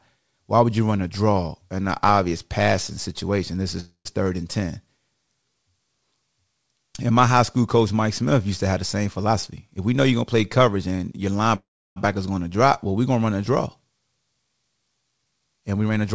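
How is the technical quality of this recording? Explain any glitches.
The recording has the thin, band-limited quality of a call: nothing reaches above 8 kHz, consistent with a wideband call codec such as G.722. On top of that there are two short freezes and two stretches of hurried playback.

Call audio freeze at 3.80 to 4.07 s, just before "third and", and at 11.56 to 11.98 s, just before "going to drop well". The sound stalls and the last fragment trails off as a fading buzz, falling to silence for the final 0.1 s in the first case and for about 0.34 s in the second. Speech then resumes intact, so the pauses of 0.25 s and about 0.4 s add time rather than cut anything out. The likely cause is delayed packets draining the receiver's jitter buffer, with the gap concealed until data arrived.

Jitter buffer speed-up at 9.27 to 11.27 s, starting after "to have the same", and at 15.11 to 16.14 s. 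The speech sounds rushed, at about 112% and 114% of normal speed, while the pitch stays unchanged. After delay had built up in the buffer, the receiver trimmed many tiny pitch-period-sized slices to catch up. This removed roughly a third of a second in the first stretch and about a sixth of a second in the second.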